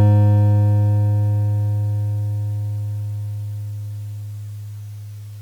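No technical faults can be heard in this music. Nothing in the recording calls for a timestamp or a fix.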